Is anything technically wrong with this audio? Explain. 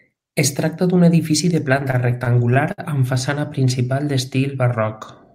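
Yes. From 1.77 to 2.80 s, after "tracta d'un edifici de" and before "amb façana", the speech shows repeated stalls (stutter). Packets arrived late, the jitter buffer kept running dry, and the receiver filled ten gaps by extending the last sound, the longest 59 ms. Nothing is lost, unlike dropouts, but the speech catches and hesitates in short jerks.

From 3.68 to 4.12 s, after "amb façana", a jitter buffer slow-down stretches the audio by 37 ms to about 93% speed. The receiver repeated single pitch periods to rebuild its reserve, so sounds draw out smoothly at unchanged pitch rather than stopping and restarting as in the stutter.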